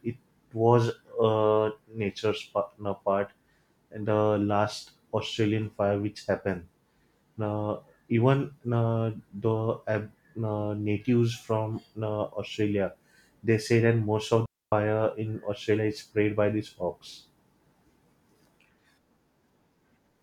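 Speech, with a single digital wireless dropout from 14.46 to 14.72 s. For about 264 ms the receiver, having lost too much of the incoming data stream, mutes the output behind a very brief fade, leaving a clean hole of near silence with no noise burst on either side. On a waveform it shows as an abrupt flat gap; on a spectrogram, a sharp-edged vertical band empty across all frequencies.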